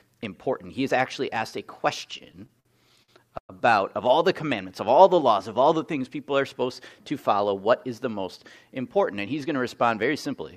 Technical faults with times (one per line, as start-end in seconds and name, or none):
2.11-3.52 repeated stalls (stutter)
5.99-6.65 jitter buffer speed-up